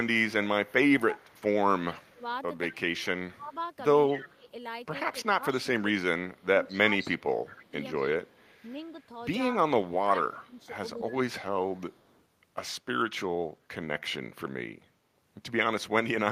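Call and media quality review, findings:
Echo leak, 0.66–4.33 s, 5.51–8.6 s and 10.22–12.22 s. Faint delayed copy of the speech, 207 ms behind, well below the direct signal and loudest in the middle stretch. Likely far-end echo canceller leaving residual loudspeaker pickup in the return path.

Speech suppressed in double talk, 1.74–8.19 s and 9.99–11.36 s. Near talker dips in pieces, down about 20 dB at worst, roughly 3 s and 0.7 s affected. Likely canceller misreading overlap as echo and attenuating both.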